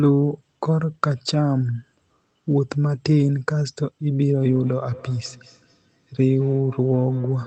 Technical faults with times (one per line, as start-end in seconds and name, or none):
4.34-7.47 feedback echo between two devices